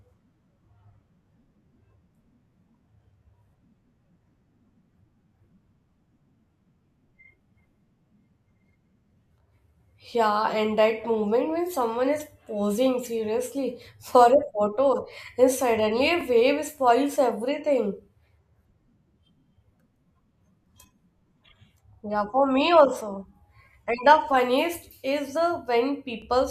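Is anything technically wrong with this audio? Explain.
Yes. The speech has overlapping chunks, with joins at 6.20, 16.21 and 26.22 s, spaced exactly 10 s apart. The audio was handled in 10 s blocks, and each new block begins 12 ms before the previous one finished, so that 12 ms slice plays twice at every boundary. Each repeat is too short to register as an echo and comes through as a brief click or stutter at a steady 10 s interval.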